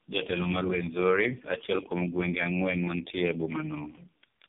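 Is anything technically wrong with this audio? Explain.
Yes. Tandem speech coding runs throughout the speech: it was decoded and re-encoded across roughly four speech coders, which fits a chain ending in low-rate AMR-NB. Each coder compounds the previous one's errors, so the rough, muffled, warbly sound, with nothing above 3.8 kHz, goes beyond what any single narrowband codec produces.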